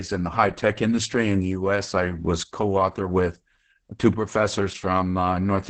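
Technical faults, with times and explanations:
Throughout: Opus voice compression. The speech is cut off above about 8.9 kHz and sounds muffled, hoarse and a bit robotic. The excitation is being coded very coarsely by the SILK linear-prediction coder at wideband, which fits a bitrate around 10 kbps.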